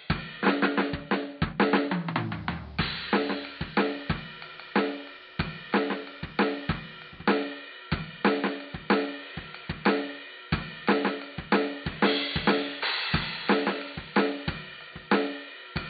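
Digital radio blending to analogue runs from 1.97 s to 7.30 s in this music clip. The receiver lost its digital stream and cross-faded over about 205 ms to the station's AM broadcast, then faded back at 7.30 s. During the analogue stretch a background hiss rises to roughly 30 dB below the music, and the overall level drops by about 2 dB. Both ease in and out with each short cross-fade.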